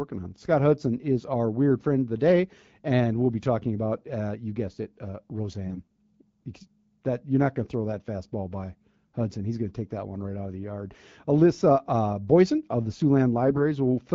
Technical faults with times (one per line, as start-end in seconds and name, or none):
5.66-5.98 AMR bit errors
13.47-13.61 AMR bit errors